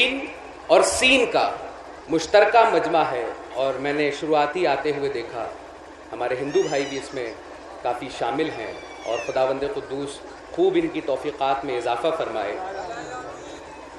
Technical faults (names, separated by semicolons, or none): none